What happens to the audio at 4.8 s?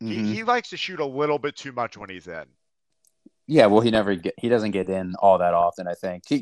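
At 4.8 s the speech carries the same plainly audible MP2 compression damage heard across the whole clip, likely from encoding at a rate near 80 kbps. Layer II divides the signal into 32 equal sub-bands and, short of bits, mutes upper bands and coarsely quantises the rest, giving dull, gurgling, granular speech rather than the clean, fixed treble loss of a simple low-pass filter.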